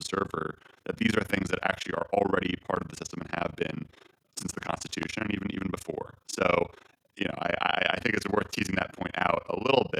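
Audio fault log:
throughout overlap-add ripple: frames were rejoined with an overlap that does not sum evenly, so the level dips by about 60 dB around 30 times a second, a rough robotic flutter over the speech.
2.76–2.78 s, 5.03–5.05 s loud pop: a short voltage pulse, likely from a switch, plug or static, hits the signal, giving a single sharp pop roughly 15 then 20 dB above the speech.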